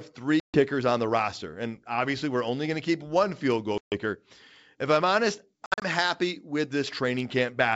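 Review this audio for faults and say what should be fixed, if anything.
Packet loss on an ADPCM call causes three silent holes: 0.40 to 0.63 s and 3.78 to 3.99 s, each about 140 ms of missing audio, and 5.66 to 5.85 s, where 120 ms drops out in scattered gaps over 160 ms, the longest 60 ms. When speech resumes, the receiver's predictor and step size no longer match the sender's, so speech briefly returns slightly distorted. Gated dropouts, unlike these, come back clean. Packet-loss concealment and decoder state resets after gaps would prevent it.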